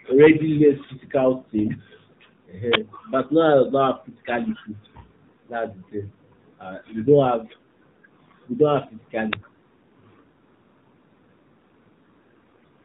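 AMR narrowband mobile codec runs through the whole clip. The speech is limited to below 4 kHz and modelled in 20 ms frames, and at what sounds like a low rate, consistent with the 7.4 kbps mode, it comes out plainly buzzy and synthetic.

An uninitialised buffer bursts at 2.73 s and again at 9.33 s. The audio chain played a block before anything was written into it, so stale memory was read as samples. Each burst is a loud crack of digital noise, the first about 20 ms long and the second about 5 ms.

AMR bit errors hit at 4.48 to 4.61 s, 8.16 to 8.32 s and 12.49 to 12.64 s. Flipped low-priority bits, a few percent of them, misplaced the excitation pulses and skewed the gain and spectral values across several frames. The speech keeps its rough pitch and level but turns hoarse, scratchy and gargly.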